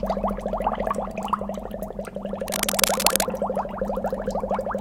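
An everyday sound recording with cable scratch noise from 2.48 to 3.25 s. Dense, uneven rustling rises somewhat above the sound. A worn, moving cable or connector is the likely cause.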